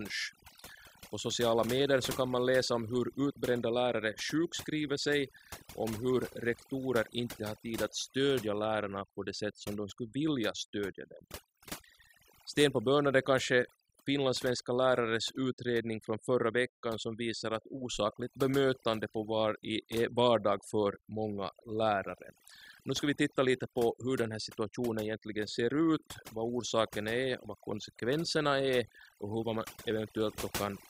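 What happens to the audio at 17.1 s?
At 17.1 s the speech carries overdone noise removal, which runs through the whole clip rather than starting there. A noise reducer set far too aggressively keeps dropping individual frequency bands whenever their level sits near its noise estimate, and softer parts of the voice get pulled down with the noise. The gaps fall to near silence dotted with twinkling specks. Unlike a plain low-pass, the loss is patchy and constantly shifting, not a steady dullness.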